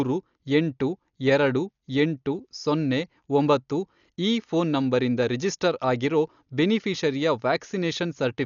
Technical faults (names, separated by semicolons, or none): Dolby Digital compression